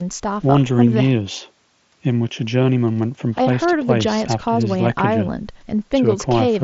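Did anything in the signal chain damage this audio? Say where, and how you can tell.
No, nothing in the chain has damaged this speech: it is carried over what sounds like a Bluetooth mSBC headset link, with the band stopping at about 7.7 kHz and only the light graininess that codec itself adds.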